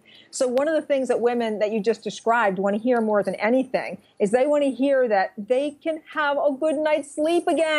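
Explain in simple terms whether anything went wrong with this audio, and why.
Nothing went wrong here.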